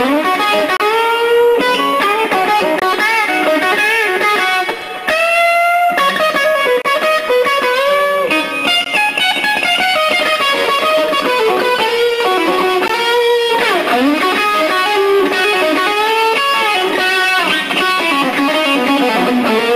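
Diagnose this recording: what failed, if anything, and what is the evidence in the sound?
Short hard-edged dropouts to silence interrupt the sound at 0.77–0.80, 2.80–2.82, 4.82, 6.82–6.85, 8.84, 12.88 and 16.89 s, lasting between 4 and 30 ms. They fall on a 2-second grid. This is a gap between stream segments at playback: mismatched segment timestamps leave holes that the player fills with silence.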